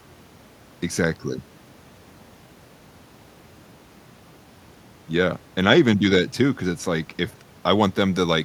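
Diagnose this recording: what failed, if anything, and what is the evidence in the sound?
Nothing in the speech stood out on listening as a sign that any stage of the recording or playback chain had failed.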